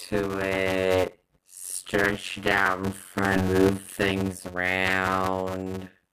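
The whole clip carries a block size mismatch (padded) fault. Each block holds only 256 real samples and the rest is filled with zeros, which fits 256-sample writes into 480-sample reads. That puts a buzz at about 91.9 Hz underneath everything and slows the speech to 0.533 times normal speed while keeping roughly normal pitch.

At 3.36 s, right after "stretch it out in", there's a skip ahead. Around 400 ms of audio is dropped and the two sides are spliced together with essentially no gap, so it lurches forward.

From 3.55 s to the end, around "how big the", a jitter buffer speed-up kicks in. The buffer trims out pitch-period-sized chunks to shed excess delay, so the speech runs about 11% faster at the same pitch and sounds a bit rushed.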